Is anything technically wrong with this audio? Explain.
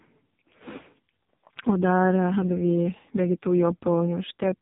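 Yes. Throughout, the speech carries the AMR narrowband mobile codec sound: nothing above 3.8 kHz and a heavily buzzy, synthetic tone, fitting the lowest 4.75 kbps mode. It models the voice from a few pulses per frame, so unlike simple low-pass filtering, the texture itself turns artificial.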